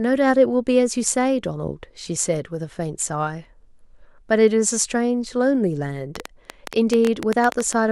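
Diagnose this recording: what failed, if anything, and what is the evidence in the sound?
A train of clicks from 6.16 to 7.74 s, about fifteen at roughly 9 per second, irregularly spaced and up to about 15 dB above the speech, likely interference on the analogue wiring.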